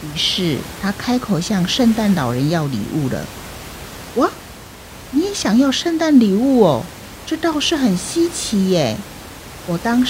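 No technical faults are audible.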